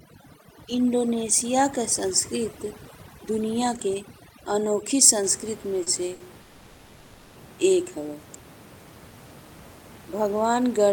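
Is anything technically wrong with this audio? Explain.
Yes, there are three kinds of fault in this speech clip.

Overdone noise removal affects 0.0 to 5.23 s. A noise reducer set too strong cuts individual frequency bands whenever they sit near its noise estimate, taking quiet parts of the speech with them. The room noise, about 19 dB below speech, drops and breaks up into sparkling specks.

Short stalls from late packets occur at 5.83 to 6.01 s and 6.15 to 6.22 s. Each time a packet arrived late, the jitter buffer emptied and the receiver stretched the last sound, about 30 ms and then 50 ms, before resuming. Nothing is lost, but a sound is briefly held.

A call audio freeze runs from 6.42 to 7.37 s. The receiver held the last sound for about 930 ms as a fading buzz or hiss without ever dropping to silence, then resumed where it stopped. The likely cause is packets delayed in transit that drained the jitter buffer.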